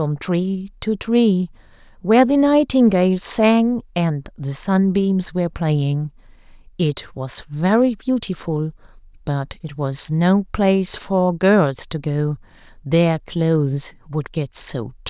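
Nothing goes wrong anywhere in this bit of speech, so there's no fault to walk through.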